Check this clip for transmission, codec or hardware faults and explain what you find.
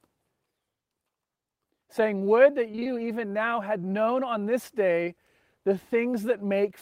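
One transmission fault appears. From 2.71 to 2.87 s, just before "even now had known", repeated packet loss (robotic sound) sets in. Short holes, the longest about 21 ms, are patched by stretching the previous sound, leaving half the span concealed and giving a choppy texture. That rapid recurrence sets it apart from a single dropout.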